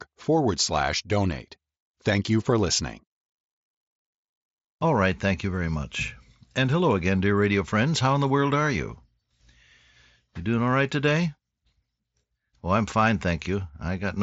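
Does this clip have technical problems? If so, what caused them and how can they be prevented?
No, this clip has no technical problems, so there is nothing to prevent.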